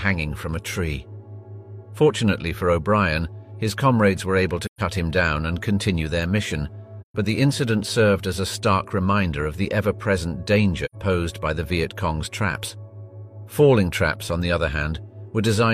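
At 4.66 s, 7.01 s and 10.85 s the sound falls into brief, soft-edged holes. This is AAC frame loss with muting. Missing frames were zeroed, and overlapping windows fade out and in. The first two gaps last 128 ms, the third 85 ms.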